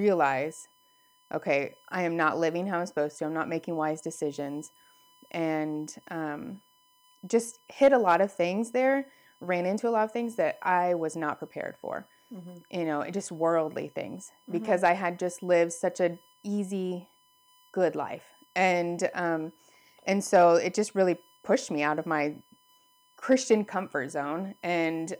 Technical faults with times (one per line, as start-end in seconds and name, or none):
0.00-25.20 USB whine